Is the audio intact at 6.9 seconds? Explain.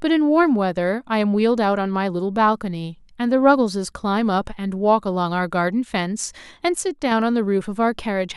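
No, a sudden gain jump from 6.81 to 7.12 s drops speech and background noise together by about 4 dB, likely an unramped gain change. The waveform shows an abrupt step down in amplitude.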